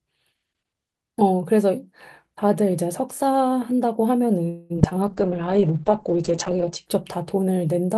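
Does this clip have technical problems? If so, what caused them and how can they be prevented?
Yes. From 4.49 to 4.72 s there is a call audio freeze: the last sound is stretched into a fading buzz for about 0.2 s, likely because delayed packets emptied the jitter buffer. Unlike packet loss, nothing is missing; the speech resumes where it stopped, just later. A larger adaptive jitter buffer and a steadier network path would prevent it.

From 4.76 to 4.93 s comes repeated packet loss with a robotic sound. Short holes of about 20 ms recur, are patched, and leave chunks actually missing, so it sounds choppy rather than simply paused. Forward error correction or redundancy, plus reducing congestion, would prevent it.

From 5.07 to 6.92 s there is a call bitrate drop from 40 to 9 kbps. Bandwidth narrows from about 20 kHz to 8 kHz, leaving the speech muffled and watery but continuous, without gaps. 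Improving available bandwidth or setting a higher minimum encoder bitrate would prevent it.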